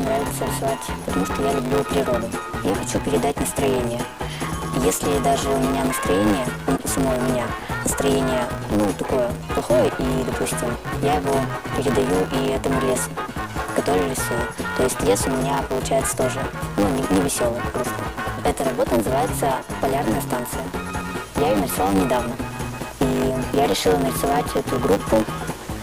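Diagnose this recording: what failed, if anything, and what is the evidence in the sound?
What failed is a block size mismatch (truncated) at the driver or buffer stage, and it runs the whole way through. There's a steady 100 Hz buzz riding under everything, and the material plays back about 1.16 times fast while the pitch stays roughly where it belongs. That points to one stage writing blocks, which fits 512 samples each, while the next stage reads shorter ones. It discards the tail of every block, so each seam clicks, and losing that slice each time speeds things up.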